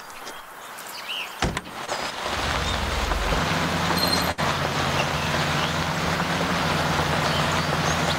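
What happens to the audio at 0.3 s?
Nothing goes wrong at 0.3 s; the audio plays through that moment intact, with no dropout, click or other fault.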